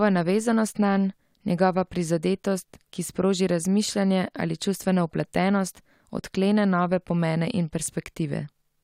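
No technical faults can be heard anywhere in this speech recording. At no point does the sound suggest that anything in the signal path went wrong.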